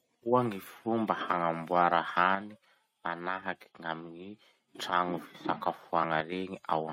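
From 2.35 to 4.75 s, and again briefly from 6.20 to 6.32 s, the speech abruptly drops by about 6 dB and then jumps back. This is likely one channel drops out: losing one stereo side halves the shared signal once summed to mono.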